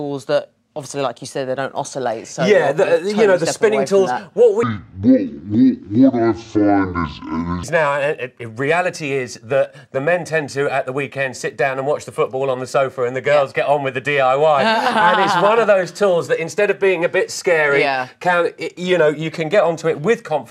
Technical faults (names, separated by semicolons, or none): section at the wrong speed